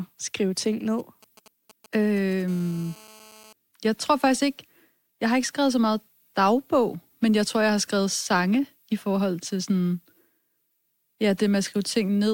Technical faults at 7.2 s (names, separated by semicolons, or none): none